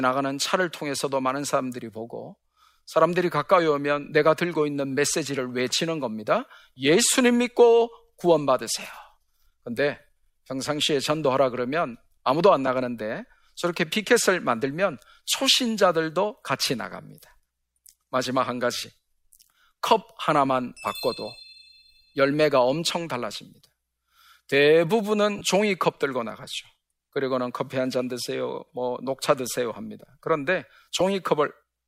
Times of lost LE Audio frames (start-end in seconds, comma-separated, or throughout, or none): 12.67, 25.38-25.41, 30.99